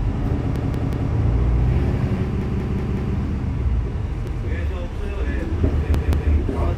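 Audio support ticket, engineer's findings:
Repeated buffer at 0.56–1.12 s (3 extra plays), 2.42–3.16 s (4), 4.27–4.46 s (1), 5.94–6.32 s (2). Same roughly 186 ms chunk stutters with hard joins, fitting an 8192-sample buffer. Output device replaying its last buffer when new audio arrived late; essentially nothing lost.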